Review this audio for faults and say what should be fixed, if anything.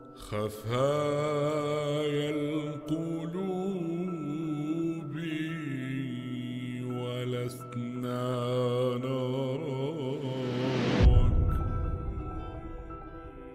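Nothing stood out on listening, so there's nothing here that needs fixing.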